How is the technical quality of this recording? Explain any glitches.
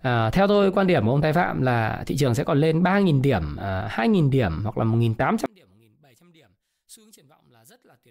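One channel inverted, from 5.46 s to the end: the speech suddenly drops by about 34 dB and turns faint. The likely cause is one stereo channel with reversed polarity, so the centred speech common to both channels cancels when summed to mono.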